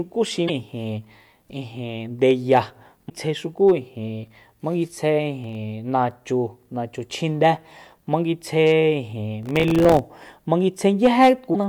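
A speech recording carrying two kinds of fault. At 0.47–0.50 s, 3.09–3.11 s and 11.53–11.56 s the sound briefly jumps ahead in a single glitch about one 24 ms frame long, likely a broken MP3 bit reservoir: after lost frames, the next frame reads borrowed bytes from the wrong place. Unlike crackle, each is one isolated jump. At 5.42–5.55 s and 9.43–9.99 s there is processor overload crackle, a gritty tearing made of many tiny silent gaps, pointing to missed deadlines on buffers of roughly 1.5 ms: a handful in the first burst, around thirty in the longer second one.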